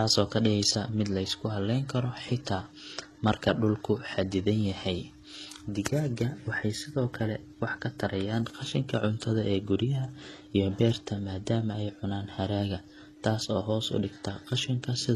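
Throughout, likely transcoding between lossy codecs, consistent with a low-rate HE-AAC pass followed by MP3, layers both codecs' artefacts on the speech, leaving nothing above 12.4 kHz.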